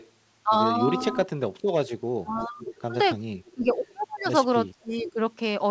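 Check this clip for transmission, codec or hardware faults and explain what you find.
Two things stand out, and they trade off against each other through the whole clip: an echo leak and speech suppressed in double talk. Both point to the far end running a speakerphone whose echo canceller isn't coping. The audio tops out around 8 kHz, which fits the G.722 call path at 64 kbps and isn't a fault in itself.

Echo leak: from 0.0 to 1.16 s, again from 2.41 to 3.88 s, and briefly from 4.96 to 5.11 s, there's a faint delayed copy of the speech trailing 423 ms behind the original. It sits about 20 dB under the speech at first, then rises to about 15 dB under in the later stretches, so it gets easier to pick out. The likely cause is the far-end microphone hearing its own loudspeaker and the canceller not subtracting all of it before sending it back.

Speech suppressed in double talk: from 1.12 to 2.62 s and from 3.54 to 5.19 s the speech dips and thins out in chunks, adding up to roughly 0.7 s in each stretch. 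The deepest drop is around 30 dB in the first one, which is close to cutting out, and around 20 dB in the second. This is likely the canceller hearing both sides at once, failing to tell the talker from the echo, and pulling everything down together.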